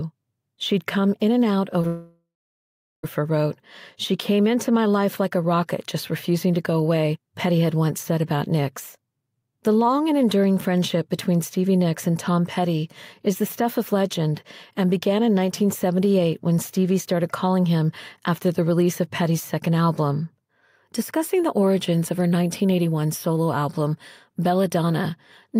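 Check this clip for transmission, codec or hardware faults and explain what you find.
Two transmission faults occur back to back, just after "come in and out".

At 1.81 to 1.85 s there is short concealed packet loss. About 20 ms never arrived. The receiver extended the last sound, leaving a brief smear.

From 1.87 to 3.05 s the sound stops, likely from a long network dropout. About 1.16 s is lost. A fading synthetic tail gives way to roughly 0.77 s of silence before the audio resumes.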